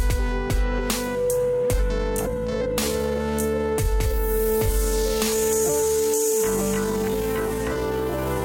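The clip is music. From 1.94 s to the end, it has a time-stretched section. The pace drops abruptly to about 0.66 times normal speed, yet the pitch does not fall. The slowed passage drags, as short pieces of audio repeat to fill the extra length. This likely comes from software stretching the audio to fit a longer duration while holding the pitch steady.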